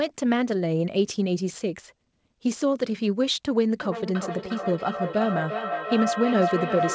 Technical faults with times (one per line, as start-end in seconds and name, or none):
3.79-6.94 feedback howl